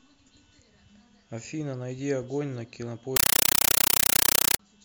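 A speech clip. From 3.16 to 4.59 s, very loud, chattering static replaces the sound. This is a compressed stream played as audio. The pattern fits an undecoded AC-3 stream sent out as plain samples. Each 8 ms noise burst, repeating 31.25 times a second, is one data frame followed by silent padding.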